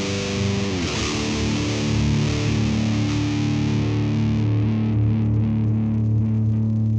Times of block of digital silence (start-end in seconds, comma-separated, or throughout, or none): none